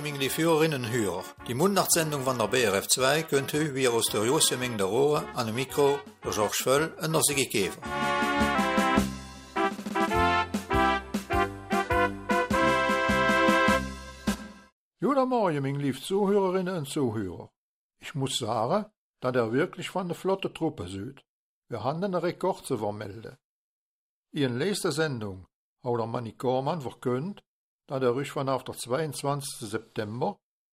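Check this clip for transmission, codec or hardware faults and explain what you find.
One fault is audible, at the very start. From 0.0 to 8.55 s the sound runs fast and sits high: a wrong sample rate. It plays about 1.09 times too fast and 1.47 semitones sharp, which fits 44.1 kHz audio played back at 48 kHz without conversion.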